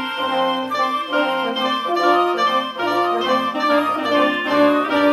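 Throughout the clip, a doubled audio track is heard. A second full-band copy of the sound trails about a second behind, a few decibels quieter. It carries no decay or room colour. Likely a second capture via a slower path, mixed back in.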